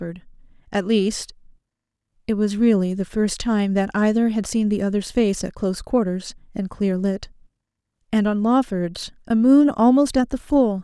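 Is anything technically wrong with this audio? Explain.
No, nothing is technically wrong with this audio.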